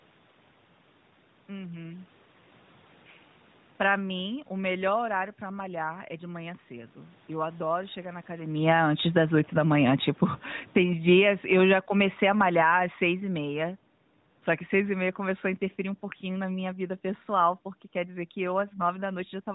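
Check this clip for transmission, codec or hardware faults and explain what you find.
One fault stands out: automatic gain falling. From 7.29 s, just after "é de manhã cedo", until 19.1 s, the level sinks steadily by about 19 dB. The automatic gain control judged the input too loud, or its background noise too strong, and pulled its gain down gradually over those twelve seconds. What separates this from the talker moving around 8.5 s is that the room noise drops along with the voice; a movement at the microphone would leave the background level unchanged.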